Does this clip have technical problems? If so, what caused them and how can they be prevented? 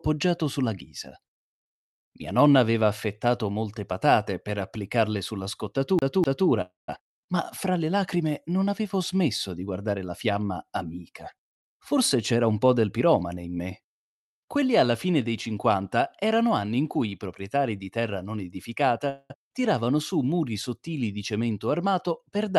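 Yes. A CD stuck on one turn hits at 5.99 to 6.49 s: a 0.25 s slice repeats twice, with a short mute at each laser jump. Cleaning the disc or re-ripping it with an error-checking ripper prevents this.

A call audio freeze happens at 6.61 to 6.89 s and again at 19.09 to 19.31 s. The sound trails off, then resumes where it left off, adding a gap of about 0.27 s and 0.2 s. This is likely from delayed packets draining the jitter buffer. A more stable network or a deeper jitter buffer prevents it.

A jitter buffer speed-up runs from 11.51 to 13.46 s. The audio plays about 13% faster at the same pitch as the receiver trims roughly 0.3 s of backlog. Smoother packet delivery, so packets don't arrive in bursts, prevents this.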